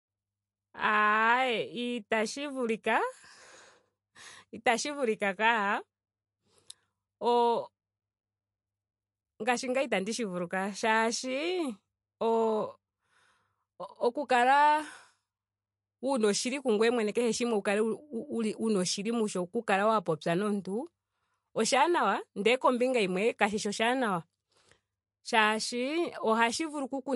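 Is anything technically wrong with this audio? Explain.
Yes. Throughout the whole speech clip there is a plainly audible watery, swirly quality, and nothing is heard above about 11.3 kHz, so the top of the treble is missing. This is likely MP3 compression at a low bitrate, around 44 kbps. Short of bits, the encoder cuts off the treble at a fixed frequency and discards weaker frequency components, which then flicker in and out from frame to frame and cause the swirling.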